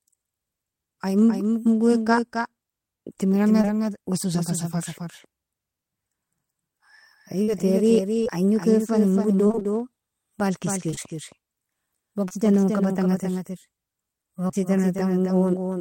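A doubled audio track runs through the whole clip. A second full-band copy sits about 5 dB below the original and roughly a third of a second behind it, with no decay or room colour. This gives every phrase a flat, slapback-like double. The likely cause is a second capture through a slower path, or an edit that holds two copies out of step.

Also present throughout is a block size mismatch (truncated). One stage writes slightly longer blocks than the next one reads, so the tail of each block is discarded. This produces a steady buzz at about 92 Hz, the block rate. Because the two block sizes are so close, the playback speed is essentially normal and the pitch is unchanged.

At 3.61 to 3.65 s, just before "wesosa fa safarr", there is a short concealed packet loss. About 20 ms of audio never reached the decoder in time. The receiver extended the preceding sound for about 18 ms and then blended back into the real signal, which is heard as a brief smear in the sound.

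From 7.43 to 12.32 s, ending just before "gon kabatanga", there are scattered short gaps. Around ten packets were lost or late, spread across the stretch, and the longest hole is about 40 ms. Each hole was filled by continuing the last sound, and together the patches cover only a few percent of the span. The result is a series of small ticks and hiccups in otherwise clear audio.

At 14.48 to 14.55 s, two short concealed packet losses fall back to back, each missing 20 ms. The first was patched for 10 ms and the second for 14 ms. The decoder bridged both holes by continuing the preceding sound, so they are heard as one slightly longer wobble.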